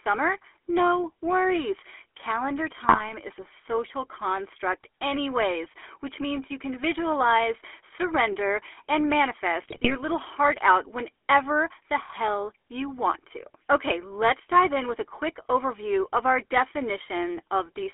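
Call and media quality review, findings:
Buzzy, gravelly roughness throughout, band limited to roughly 300 Hz to 3.4 kHz. GSM full-rate codec: pulse-excited vocal-tract model, decimated excitation, consistent with 13 kbit/s.

Squawks, pops and gargling at 2.84–3.12 s and 9.62–9.95 s. GSM bit errors: corrupted filter, pitch and gain parameters distorting spectrum and level per frame.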